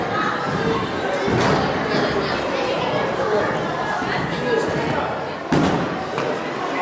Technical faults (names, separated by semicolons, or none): none